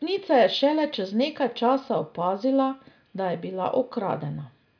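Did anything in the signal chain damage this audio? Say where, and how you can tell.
No, nothing in this speech recording stood out on listening as damage from any stage of the signal chain.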